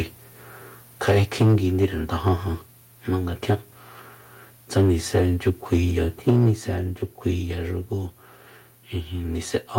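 From 1.08 to 1.56 s the microphone's input was likely set too high, so the loudest peaks drove the converter about 6 dB past its limit. This is microphone overload: roughly a tenth of the samples have their tops flattened, and the speech gains a harsh, crackly edge. At 1.42 s, partway through that distorted stretch, the input gain was likely lowered automatically in a single step of about 3 dB. This is the microphone volume being stepped down, and it makes voice and background drop in level together, abruptly.

A brief second overload, likely from the same excessive input level, follows from 1.82 to 1.85 s. It runs about 3 dB over the limit with around 7% of samples clipped, and is heard as a short crackle.

The worst overload comes from 6.28 to 6.49 s. The input was likely driven about 8 dB beyond the converter's limit, with roughly a tenth of samples clipped, and the distortion is at its harshest here. 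At 6.30 s the microphone volume is stepped down again by about 3 dB, likely in reaction to that peak, and the whole signal audibly falls in level just after the crackling begins.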